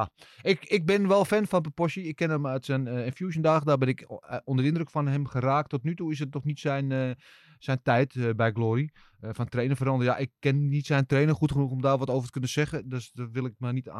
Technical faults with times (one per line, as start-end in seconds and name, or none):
none